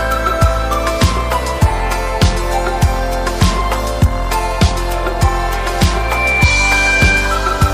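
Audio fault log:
5.95–7.45 s, loudspeaker feedback squeal: a pure tone at 2.4 kHz swells over about a third of a second, standing somewhat louder than the surrounding sound until it stops at 7.45 s. A microphone is picking up the loudspeaker it feeds, and at 2.4 kHz the loop gain exceeds one, so that frequency reinforces itself on every pass. On a spectrogram it is a single bright horizontal line; the waveform envelope balloons within that first third of a second.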